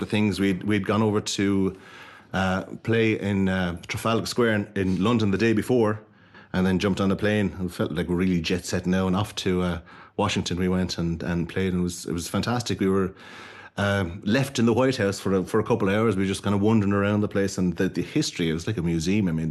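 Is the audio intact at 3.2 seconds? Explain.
Yes, at 3.2 seconds the speech passes intact through the WebRTC call path, with nothing breaking up, dropping out or distorting at that moment.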